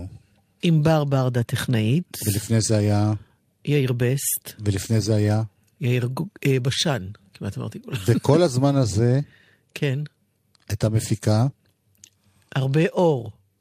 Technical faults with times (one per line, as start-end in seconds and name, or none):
none